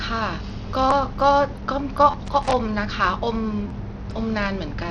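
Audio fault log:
throughout: Bluetooth SBC compression. The top sub-bands drop out and flicker, with gritty noise and aliasing riding on the speech. This is likely the SBC codec starved of bits, fitting a low rate near 80 kbps. A spectrogram shows a ragged, blotchy upper band and coarse quantisation speckle.
0.91, 2.11–2.14, 3.68–3.70: repeated buffer. A segment of about 11.6 ms replays once, then twice, then twice, which fits a 512-sample buffer. Each is heard as a brief buzz or stutter with hard joins. The waveform shows identical copied blocks with abrupt edges, and the spectrogram shows thin vertical lines at each join.
2.26–2.62: loose connector crackle. A contact making and breaking chops the signal into an irregular burst of scratching. The waveform shows jagged gaps and sharp spikes, and the spectrogram shows scattered broadband vertical streaks.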